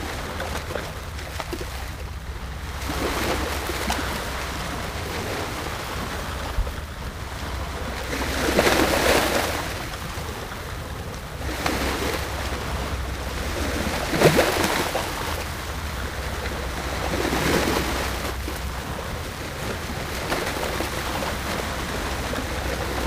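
Throughout the clip the sound carries periodic clock jitter: interference is wobbling the converter's sampling clock at a steady rate of roughly 2 kHz, so each moment is captured slightly early or late in a repeating pattern. Every component gains sidebands about 2 kHz above and below it, strongest around the brighter, high-frequency content, giving a rough, metallic edge that disappears in silence. On a spectrogram these appear as ghost lines shadowing each partial at that fixed spacing. The waveform looks nearly normal.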